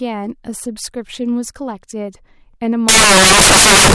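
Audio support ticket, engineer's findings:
Loud broadband noise from 2.89 s to end of clip. Samples built from the wrong bytes. Probable component: decoder or sample reader. Byte offset, order or alignment wrong. Low bits land in high positions.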